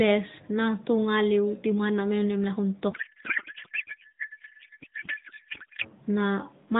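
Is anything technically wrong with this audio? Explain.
Yes. From 2.9 to 5.9 s there is a codec payload misread. The speech turns to garbled noise and warble, which fits octet-aligned AMR frames being unpacked as bandwidth-efficient.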